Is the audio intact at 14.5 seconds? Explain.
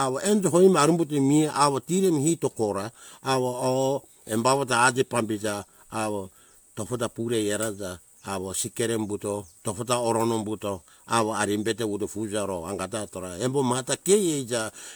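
Yes, the speech is intact at 14.5 seconds, with no dropout, click, distortion or other fault at that moment.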